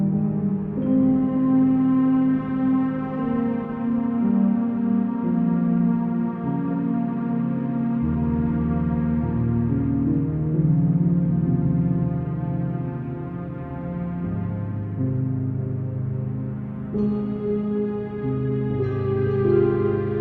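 Nothing in this recording of sounds stands out as a technical fault; it just rolls along as it should the whole way.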